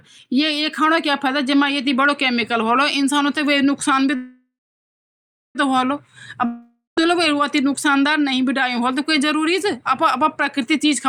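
A speech recording with two gaps. From 4.15 to 5.57 s a call audio freeze stretches the last sound into a fading buzz, then about 1.05 s of silence, and the speech resumes exactly where it stopped, now about 1.4 s late. This likely comes from delayed packets draining the jitter buffer. A spectrogram shows a smeared, decaying band and then an empty column. From 6.45 to 7.02 s a long network dropout fades the sound out, leaves about 0.15 s of flat silence, and resumes with roughly 0.52 s of speech gone, likely from lost packets. On the waveform this is a tapering tail followed by an abrupt restart.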